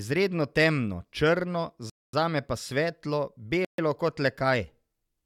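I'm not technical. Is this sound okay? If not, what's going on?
No. The speech briefly cuts to silence twice: at 1.90 s for about 0.24 s, between "temno črno" and "zame pa svetlo", and at 3.65 s for about 0.14 s, after "črno zame pa svetlo". This is likely a Bluetooth stall. Unlike a dropout, where a piece of sound goes missing, playback simply pauses and resumes where it stopped.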